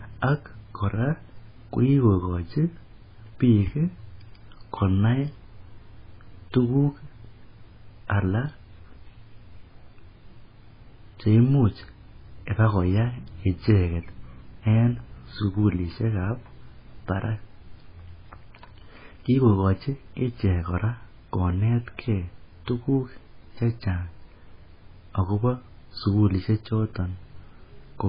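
From start to finish the speech carries heavy MP3 compression damage, most likely from a very low-bitrate encode, around 16 kbps by the sound of it. Nothing survives above 5 kHz, so s sounds lose their hiss and come out dull and lisped. Weak frequency lines flicker in and out, giving a watery, swirly texture and metallic chirps, and consonant attacks smear. A spectrogram shows a hard ceiling at 5 kHz and speckled, blocky patches below it.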